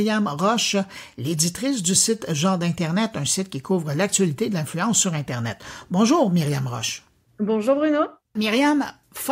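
Nothing goes wrong anywhere in this stretch of speech; there's simply no technical fault to point to.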